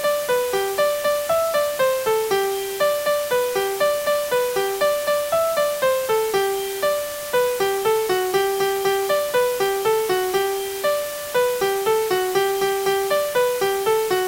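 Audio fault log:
throughout, low bit depth with dither: A steady, even hiss sits under the sound for the whole clip, only roughly 10 dB below the signal, with no gritty distortion. The sample values are rounded to very few levels, which fits a 5-bit word length, and dither randomises the rounding error into plain white noise. A spectrogram shows a flat noise floor filling every frequency band at all times, and the waveform looks thickly fuzzed even in the quietest passages.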